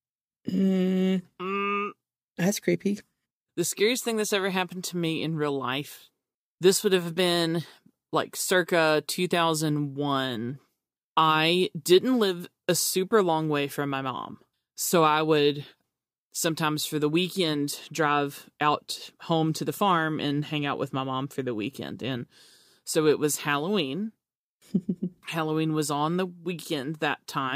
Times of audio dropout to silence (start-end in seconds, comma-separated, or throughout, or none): none